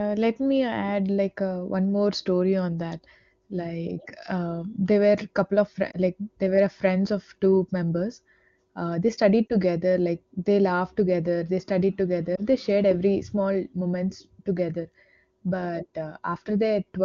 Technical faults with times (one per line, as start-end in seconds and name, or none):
5.91-5.97 lost AMR speech frames
9.48-9.56 lost AMR speech frames
12.36-12.40 lost AMR speech frames